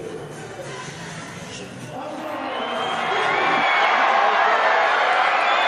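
No faults can be heard anywhere in this audio.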